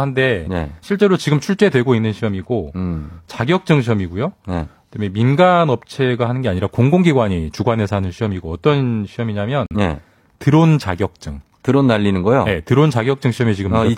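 At 9.66 s the speech drops abruptly into silence for about 0.1 s, fitting two lost frames: a corrupt frame muted, where the decoder rejected damaged compressed frames and the player filled their place with silence.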